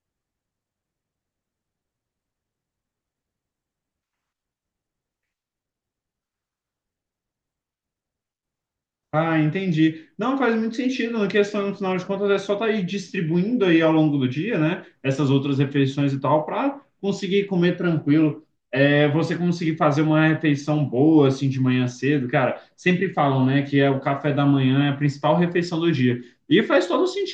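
No technical faults heard.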